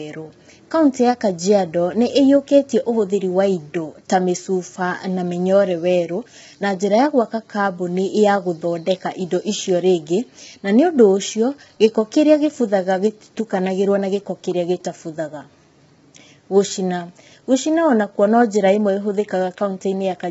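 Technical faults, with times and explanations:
Throughout, low-delay AAC compression: the speech sounds rough and grainy, with a hiss-like fill between the voice's harmonics and no content above 7.7 kHz. This is likely from AAC-ELD at a very low rate, which fits about 16 kbps. Its short frames blur pitch detail, so the damage spreads as steady graininess rather than the pre-echo of longer-frame codecs, and it goes beyond simple dullness from a band limit.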